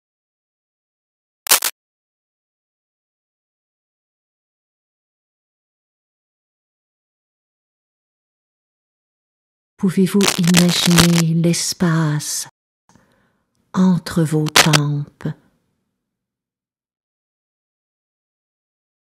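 The audio carries two kinds of fault. Cable scratch noise appears three times: from 1.46 to 1.72 s, from 10.21 to 11.21 s and from 14.46 to 14.79 s. Each is a patch of ragged, uneven scratching laid over the sound. The first and last are roughly as loud as the sound itself, and the middle one is somewhat quieter. The likely cause is a worn cable, plug or control being moved, so its contact resistance jumps around. On a spectrogram these show as dense, broadband speckled smears. On the waveform they are spiky, irregular bursts riding on top of the signal. There is also a rebuffering stall from 12.49 to 12.89 s. The sound drops to silence for 0.4 s, then picks up exactly where it stopped, with nothing missing but that much time added. This fits a player that ran out of downloaded audio and waited for more. It appears as a flat, empty line on the waveform and a clean blank vertical band on the spectrogram, with no gap or jump in the material on either side.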